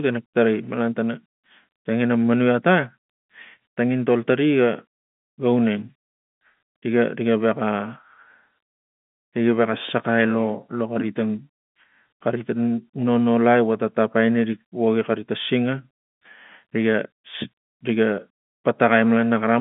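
No faults occur anywhere in this telephone-band speech.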